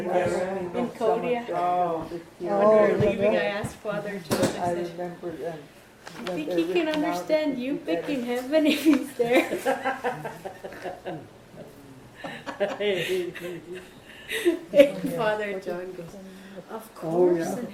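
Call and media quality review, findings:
No audible faults found; nothing to escalate on this call.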